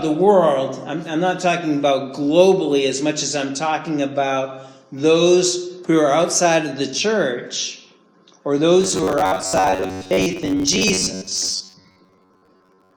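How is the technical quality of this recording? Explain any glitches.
The recording has one clear fault. Robotic sound from repeated short buffers runs from 8.81 s to 12.96 s. New audio likely arrives too seldom, so a fragment of about 10.7 ms is replayed in place of roughly half the real material. The loop stamps a fixed 93.8 Hz buzz onto the sound, which turns rigid and metallic while still loosely tracking its original shape.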